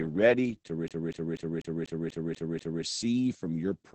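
Throughout, the speech sounds muffled, hoarse and faintly robotic, with nothing above 8.5 kHz. This is heavy Opus voice compression, coarse SILK coding that fits a bitrate around 10 kbps. From 0.88 to 2.84 s, a 0.24 s fragment stutters evenly eight times, with brief mutes at each jump: a CD stuck on one turn, the laser skipping back each revolution.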